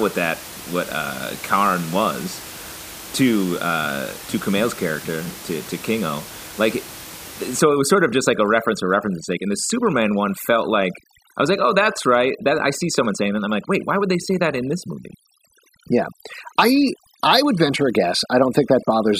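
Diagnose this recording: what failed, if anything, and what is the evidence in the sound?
From 7.59 s to the end, overdone noise removal in the call processing gates bands sitting near the room-noise floor, leaving twinkly near-silence and taking quiet parts of the voice with them.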